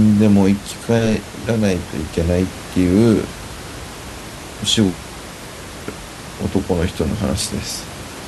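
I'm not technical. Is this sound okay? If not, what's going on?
Yes, nothing has gone wrong with this speech recording. The faint background noise of the room sits well below the talking and belongs to the space where the microphone was, not to any problem with the system.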